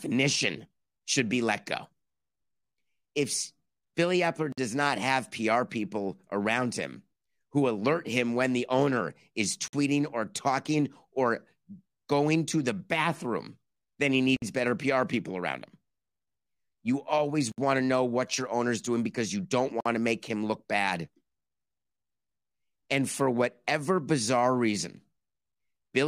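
Gaps at joins of encoded pieces occur at 4.52, 9.68 s (after "when the owner is", before "or talking or"), 14.36 s (after "the bathroom then he"), 17.52 s (before "want to know what") and 19.80 s. Each is a 51 to 63 ms silence cut into running speech, with smeared edges, after which the speech resumes where it stopped. Separately encoded segments were joined without trimming each run's start delay and final-frame padding.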